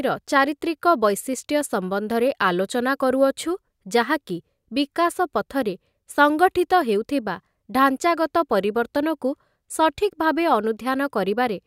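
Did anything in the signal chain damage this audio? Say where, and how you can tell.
No, no signal-chain damage audible.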